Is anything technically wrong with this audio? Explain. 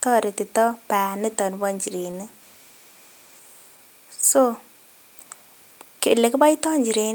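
Yes: at 2.11 to 2.17 s there's a short stall from a late packet, so the jitter buffer ran dry and about 23 ms of speech gets stretched, with nothing lost.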